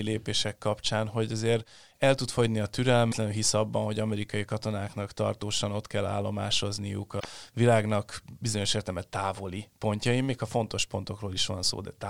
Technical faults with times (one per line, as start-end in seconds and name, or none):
3.08-3.13 damaged data in a compressed stream
7.17-7.25 damaged data in a compressed stream